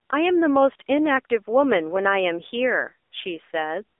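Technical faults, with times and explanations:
throughout AMR narrowband mobile codec: the speech sits in a narrow 300 Hz to 3.6 kHz band, with nothing above 4 kHz, and sounds plainly buzzy and synthetic. That points to a low-rate AMR-NB mode around 7.4 kbps rebuilding the voice from a vocal tract model driven by a few pulses in each 5 ms, unlike simple band-limiting, which stays natural.
0.06–0.10 s, 3.10–3.12 s, 3.98 s AMR comfort noise: in these brief pauses the real background gives way to smooth, steady synthetic hiss lasting roughly 20 to 40 ms, switching in and out abruptly. This is generated fill, not a dropout to silence.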